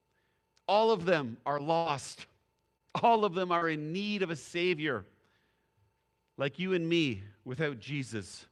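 It's a speech clip with a cluster of network losses in its first four seconds. The first is a burst of packet loss right after "of them are", from 1.77 to 1.87 s: about 80 ms of audio never arrived, and the receiver papered over it by stretching the last sound and fading it for roughly 78 ms. So you hear a held buzz or hiss that dies away, then the talker picks up a bit further along with that stretch gone. Then there's the lost packet rebuilt from error correction, three times, each a single 20 ms frame. One sits at 1.85 s, the tail end of that burst. Another is at 2.13 s, and the last at 3.61 s, between "of them" and "in need of a". Each lost packet was replaced by the lower-bitrate copy riding in the next packet, so there's no hole. Those frames just come out coarser and noisier than their neighbours. Finally, short concealed packet loss shows up at 2.77 to 2.82 s, about 20 ms missing and filled over about 26 ms, and at 3.58 to 3.63 s, about 40 ms missing and filled over 34 ms. 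The decoder guessed its way across each gap from the preceding sound and blended back in, which gives a quick smear or wobble. The second one runs straight into that 3.61 s rebuilt frame.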